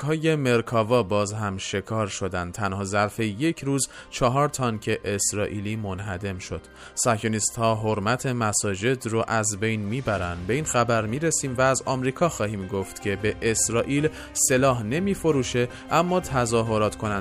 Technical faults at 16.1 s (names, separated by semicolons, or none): none